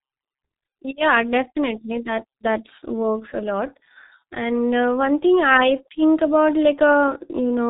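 From start to finish the speech carries heavy G.723.1 codec damage. Nothing gets through above about 3.8 kHz, so it's muffled and boxy, and the codec's slow-moving voice model smears the consonants together and leaves a hoarse, buzzy edge on the vowels. That heavy-handed coarseness points to a very low bitrate, something like a 6.3 kbit/s stream, where each 30 ms frame just doesn't get enough bits to follow the speech properly.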